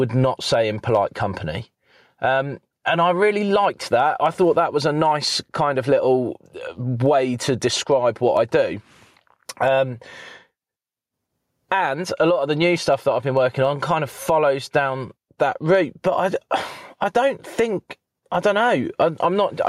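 Gain pumping runs throughout, likely from excessive gain and a fast limiter: the gain is pulled down on each loud speech moment, swinging by around 10 dB, flattening waveform peaks.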